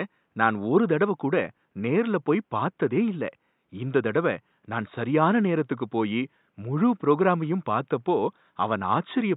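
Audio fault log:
The speech signal shows no technical faults, with only a faint room noise from the recording space sitting about 51 dB below the speech.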